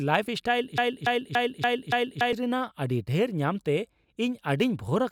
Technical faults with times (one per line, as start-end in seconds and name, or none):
0.78-2.33 broken-record loop